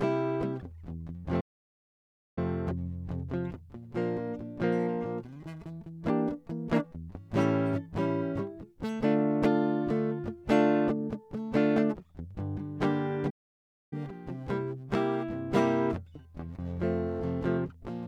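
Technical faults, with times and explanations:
1.40–2.38 s and 13.30–13.93 s, playback stall: the music cuts to silence mid-flow for about 0.96 s, then again for about 0.62 s, before carrying on. Each gap is most likely the player running short of data or its output thread being blocked until it recovered.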